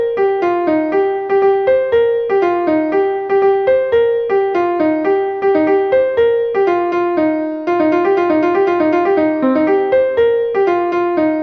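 Nothing is technically wrong with the audio; no faults can be heard anywhere in it.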